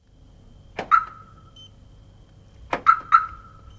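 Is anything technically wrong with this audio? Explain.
No, nothing is technically wrong.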